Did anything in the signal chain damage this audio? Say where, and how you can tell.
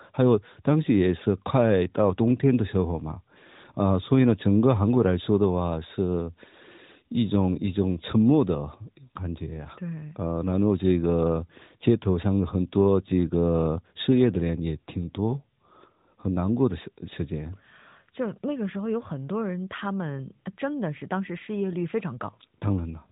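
No, nothing in the signal chain stood out as damaging this speech when I listened to it.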